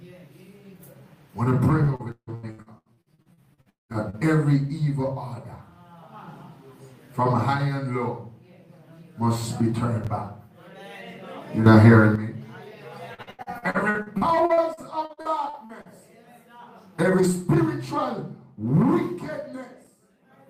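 From 1.83 to 4.20 s there's repeated packet loss. Dropouts keep getting patched by stretching the last sound, so nearly half the stretch turns choppy and robotic, with gaps up to 195 ms. At 11.66 s the level jumps up by about 10 dB, noise included, and stays up until 12.16 s. That's likely a sudden gain jump with no ramp. From 13.14 to 15.88 s the robotic packet-loss chop returns, though the gaps are shorter, at most 76 ms.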